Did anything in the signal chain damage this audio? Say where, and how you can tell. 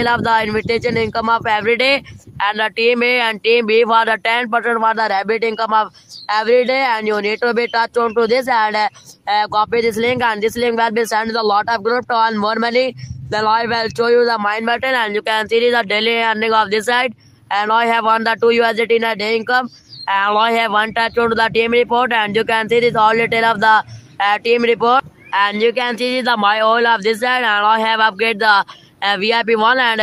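Yes. The damage sits at the network receiver's jitter buffer, caused by clock drift between sender and receiver. The sender's clock runs about 3% slow against the receiver's, so the buffer keeps draining and the receiver must stretch the audio to avoid running dry. Ordinary network jitter produces corrections in both directions, and packet loss leaves gaps or concealment smears. Here every adjustment pushes the same way, lengthening the audio, which points to a steady rate mismatch.

The repeated timing corrections run from 0.30 s to 29.93 s. The receiver repeats short pieces at uneven intervals, and the stretch plays at 97% of its proper pace, adding roughly 0.7 s in total. Each insertion is tiny, so any audible trace would be slight hiccups or an unsteady tempo rather than clear dropouts. A sample-rate conversion error would slow the tempo smoothly and lower the pitch. Here the pitch holds, and the slowdown arrives in small uneven steps.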